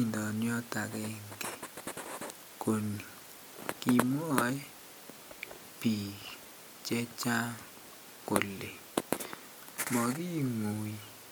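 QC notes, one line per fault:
No faults heard in this speech recording.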